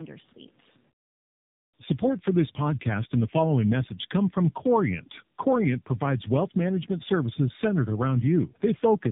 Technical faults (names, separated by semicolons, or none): tandem speech coding